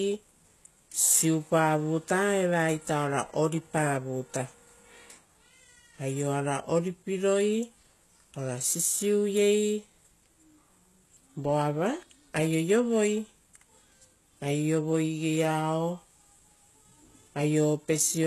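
Throughout, the speech has a bright but gritty, metallic top that stops dead at 12.3 kHz, likely HE-AAC compression rebuilding treble at a bitrate around 16 kbps.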